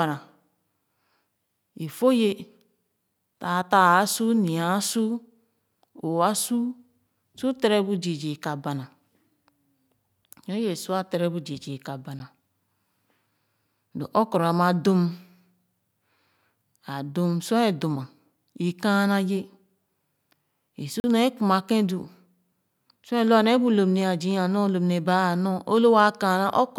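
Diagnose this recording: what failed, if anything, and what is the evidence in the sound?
The speech drops out twice with hard edges. At 12.19 s a 10 ms hole registers as a sharp tick, and at 21.00 s, just after "i su", a 40 ms gap is heard as a short hole. Both are blocks of digital silence: runs of samples replaced by zeros, with no fade in or out. The likely stage is the driver or buffer, where output samples were not delivered in time.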